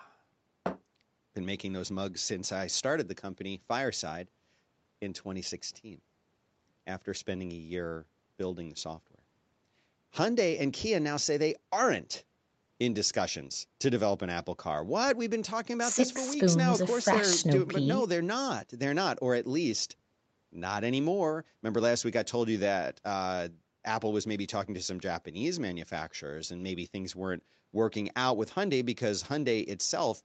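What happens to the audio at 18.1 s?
At 18.1 s the speech runs on intact, with no dropout, glitch or other fault, just the normal band limit of the call path, which leaves nothing above 8 kHz.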